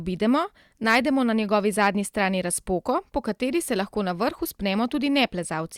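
Hard clipping hits the speech twice, from 0.88 to 0.98 s with about 4 dB of overdrive and from 1.81 to 1.87 s with about 2 dB. Peaks exceeding the stage's limit are sliced flat, giving brief crackle rather than the rounder, duller thickening of soft saturation.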